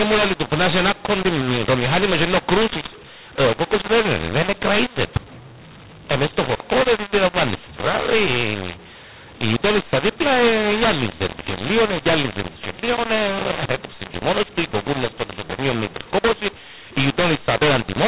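Speech over a telephone channel, band-limited below 4 kHz, which fits 8 kHz G.711 coding. Throughout, mu-law and A-law are mixed up. Audio coded as A-law is decoded as mu-law, scrambling levels. The voice sounds harsh, and pauses fill with noise.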